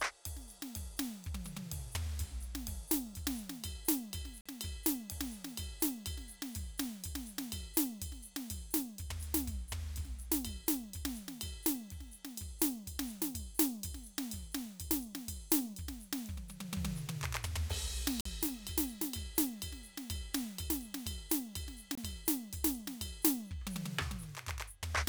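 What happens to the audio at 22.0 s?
Audio data likely reached the headphones too late and was discarded, a Bluetooth dropout whose length fits one lost packet. From 21.95 to 21.98 s the music cuts to silence for about 23 ms, then resumes further on, as though it had kept playing.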